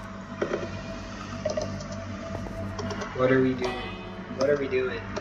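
From 0.44 s to 3.02 s the audio carries a doubled audio track: a second full-band copy trails the original by roughly a tenth of a second at about equal level, with no decay, cutting in and out abruptly, likely from the same signal captured twice through a slower path.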